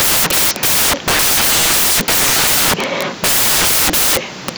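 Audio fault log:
Throughout: samples built from the wrong bytes. Misassembled sample bytes push low-order bits to the top, giving loud, harsh broadband noise, close to white on loud sounds.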